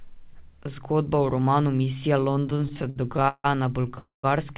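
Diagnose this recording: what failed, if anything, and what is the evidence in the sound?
Repeated stalls (stutter), network and jitter buffer: from 2.5 to 3.46 s the speech halts 16 times, the longest gap 160 ms, each bridged by extended sound as late packets drained the buffer.

Call audio freeze, network and jitter buffer: at 3.99 to 4.25 s the sound holds, fades to 140 ms of silence, then resumes where it stopped, likely from delayed packets emptying the buffer.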